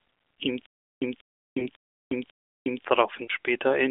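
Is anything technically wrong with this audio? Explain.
Yes, there are two faults. From 0.66 to 2.85 s there is a stutter with silent gaps: a 186 ms fragment repeats four times, each followed by 362 ms of dead digital silence, on a steady 548 ms cycle. A stalled player or stream, likely retrying and replaying its last buffer, causes this. The exact repeats and hard silence set it apart from frame loss.

Lost AMR speech frames appear at 1.60 to 1.68 s and 3.26 to 3.30 s, one 20 ms frame each. The decoder bridges each gap from the previous frame's settings at reduced gain, producing a brief dip or warble within the narrowband telephone sound, with no looping and no true silence.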